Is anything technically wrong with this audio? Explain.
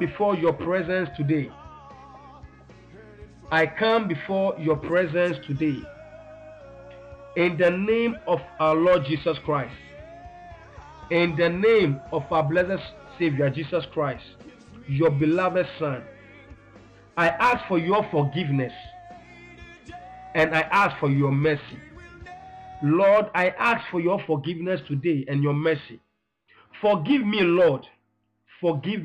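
No, nothing technically wrong is audible anywhere in the recording.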